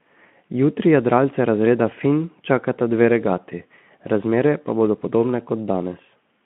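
Nothing in the recording stood out as a fault on careful listening.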